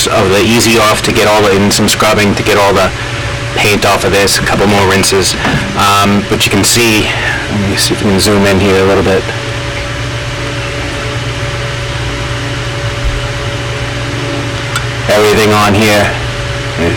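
Every loud moment, from start to finish, comes out as a harsh, buzzing fuzz rather than clean peaks. This is hard clipping: the signal is driven about 26 dB past what the stage can pass, so nearly a third of the waveform is sliced flat, adding bright harmonics.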